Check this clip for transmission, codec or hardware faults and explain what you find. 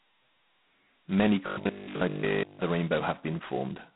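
One fault runs through the whole speech clip: G.726 ADPCM coding at a very low rate. The harsh, rasping hiss that swells and fades with the speech level points to the 16 kbit/s mode, where each sample carries only two bits of difference from an adaptive prediction. The band is telephone-narrow, 150 Hz to 3.4 kHz, with nothing above 3.9 kHz. A spectrogram shows a flat ceiling and grainy noise filling gaps between harmonics. The waveform looks fuzzy, not smooth.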